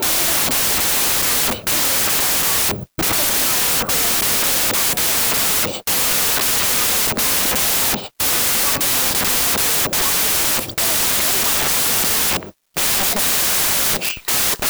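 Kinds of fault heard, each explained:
Wrong sample width: the speech runs the whole way through a loud, harsh noise bed, sped up 1.5 times and pitched up to match, which fits 16-bit samples being read back as packed 24-bit ones. Each new value straddles bytes from two original samples, so most are garbage, and only the ones that happen to keep the real high-order bits carry the voice, which is why it sits buried under the hiss.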